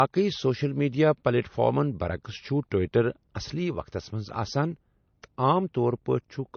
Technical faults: low-bitrate audio saved at a high bitrate

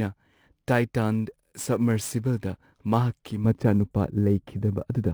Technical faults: sample clock jitter; de-emphasis applied wrongly

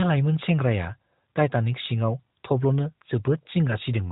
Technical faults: none

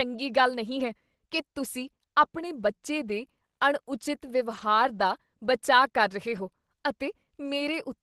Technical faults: lost packet rebuilt from error correction

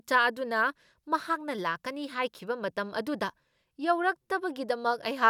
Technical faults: none

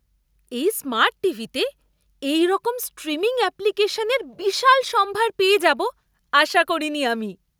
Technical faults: none

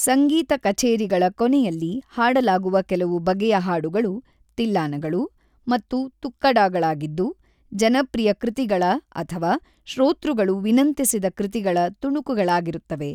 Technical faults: none

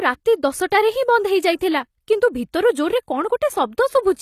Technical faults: HE-AAC compression; pre-echo

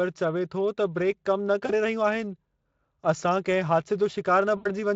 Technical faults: VoIP packet loss concealed by the speech codec

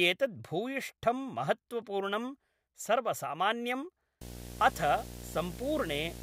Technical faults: video or display buzz

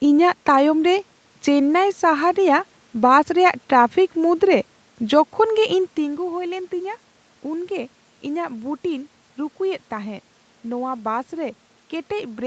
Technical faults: none

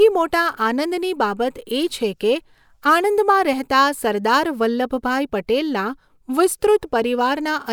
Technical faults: none

